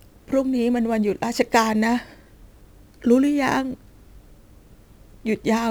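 Crude rate conversion runs throughout this speech clip, from start to finish. Samples were repeated to raise the rate with no filtering, which fits a step from 44.1 kHz up to 48 kHz. The result is an inharmonic, gritty fizz riding on louder and brighter syllables, roughly 30 dB below the voice.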